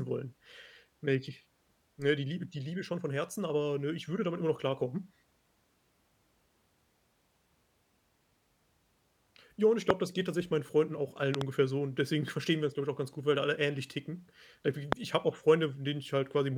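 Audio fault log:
9.90–9.92 s, loud pop: a single sharp transient about 25 dB above the speech, between "und ich" and "das geht tatsächlich meinen", likely a voltage step from a switch, plug or static that the downstream circuitry shapes into a brief click.
11.35–11.43 s, loud pop: two pops in quick succession, about 20 dB above the speech, after "auch allen" and before "so und deswegen verstehen". The speech continues underneath.
14.92–14.95 s, loud pop: one more pulse about 25 dB above the speech, just before "ich habe auch".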